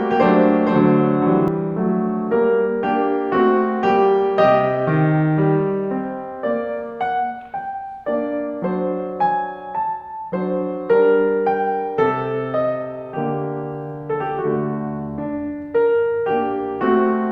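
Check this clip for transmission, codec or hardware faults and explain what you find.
One fault is present in this music. A doubled audio track runs from the very start to 1.48 s. A full-band copy trails about half a second behind, around 5 dB quieter. It is dry, with no decay. It stops abruptly. The likely cause is a second, slower capture path or an edit holding two copies out of step.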